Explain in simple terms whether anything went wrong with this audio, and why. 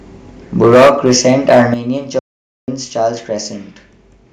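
Between 0.61 and 1.74 s there's microphone overload: the speech gets harsh and crackly on its loudest bits because the peaks are being squashed flat. The likely cause is the mic input set too high, so the tops of the waveform get cut off.

You'll also hear the microphone volume stepped down twice, at 0.74 s and again at 1.74 s, where the level suddenly drops a notch, and much more so the second time. That's likely the call software noticing the distortion and turning the mic input down in one go.

Then there's an audio dropout to silence from 2.19 to 2.68 s, about half a second of total dead air with no room sound at all. The input was likely lost for a moment, so whatever was said during that gap is simply gone.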